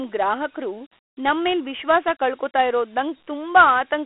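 A short speech clip that has been through Dialogic VOX ADPCM for its whole length. The sound sits in a telephone band of roughly 300 Hz to 3.4 kHz, with nothing above 3.9 kHz, which points to 4-bit samples at 8 kHz, so about 32 kbps. The coarse 4-bit steps leave a plainly audible gritty hiss that rides along with the speech, because each step only approximates the change from the previous sample.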